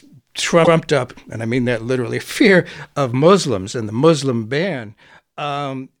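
Speech with two faults. From 0.64 to 0.76 s, just before "up and I mean", repeated frames replay a 120 ms block once, heard as a stutter; the waveform shows that stretch duplicated back to back. After "and the", from 4.38 to 4.8 s, zipper noise ticks through a stepped drop of roughly 10 dB at about 50 steps per second, visible as faint evenly spaced vertical lines on a spectrogram.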